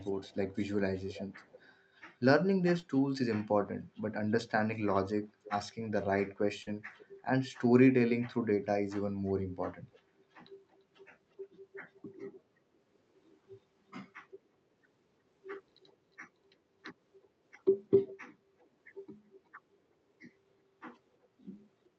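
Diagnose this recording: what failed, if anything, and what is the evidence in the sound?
Echo leak, at the call-processing stage: faint to very faint delayed copies of the speech at 0.01–1.75, 4.74–5.51, 6.98–7.52, 9.92–10.76, 11.73–11.78, 15.86–15.95 and 17.22–18.67 s. The delay creeps from 320 to 361 ms. That drift and the partial copies, rather than room reverb, point to a far-end echo canceller that is likely leaking loudspeaker pickup.

Short concealed packet loss, on the network: at 2.79–2.85 and 6.63–6.69 s, 40 ms of audio went missing and was bridged by 32 and 40 ms of extrapolated sound. It is a brief smear rather than a gap, click or repeat, which marks receiver concealment. The 8 kHz top end suggests a call codec.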